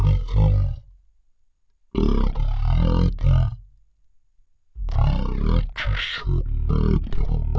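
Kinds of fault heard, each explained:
Wrong sample rate: The speech plays at one third of its proper speed, and its pitch drops 19 semitones. Speed and pitch fall together by the same ratio. This fits audio recorded at 48 kHz being played back at 16 kHz without conversion.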